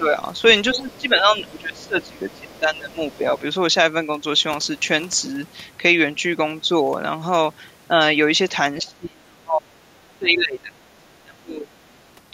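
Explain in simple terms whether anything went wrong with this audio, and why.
Speech suppressed in double talk occurs at 0.0 to 0.16 s, 0.74 to 3.42 s, 8.82 to 9.8 s and 10.16 to 11.74 s. The talker's voice dips or drops out in pieces, only slightly at the very start but sharply later, most of all around 9 s. This is likely an echo canceller that heard both people speaking at once, could not tell the talker apart from the far side's voice, and turned everything down.

The other side's voice leaking through is audible at 0.89 to 1.01 s, 1.44 to 2.59 s and 3.11 to 3.16 s. A faint second voice appears underneath, in quick scraps and one longer stretch. The likely cause is that the far side was playing through a loudspeaker, and the microphone picked it up before the echo canceller could remove it completely.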